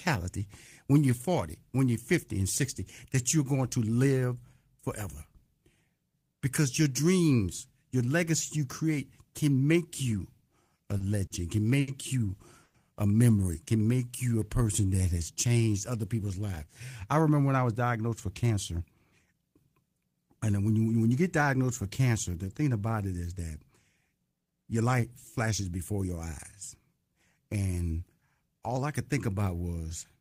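Speech runs through a sequence of late-packet faults over roughly ten seconds. The first is a run of four short stalls from late packets, at 10.77, 10.97, 11.26 and 11.80 s. Each time the jitter buffer ran dry, the receiver held the last sound until the packet turned up, stretching it by about 20, 30, 40 and then 70 ms with a faint buzzy sustain. The longest comes just before "you a memory can", and nothing is lost in any of them because playback resumes where it paused. At 12.63 s the audio freezes for about 130 ms. The last sound is drawn out as a fading buzz for roughly 110 ms and ends in about 10 ms of silence before the speech carries on intact, most likely because packets were held up long enough to empty the buffer completely. From 13.83 to 15.71 s, between "you a memory can" and "other people's", a jitter buffer slow-down plays the speech at about 91% speed with unchanged pitch. 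The receiver repeated pitch periods and pause fragments to rebuild its reserve, adding about 178 ms, so syllables sound drawn out. Two jitter buffer speed-ups follow, from 17.58 to 18.82 s at about 109% and from 19.25 to 20.67 s at about 110%. In each the receiver trimmed short pitch-period slices to shed excess queued delay, removing roughly 150 ms per stretch, so the speech sounds hurried at the same pitch. The second ends just before "when you when you".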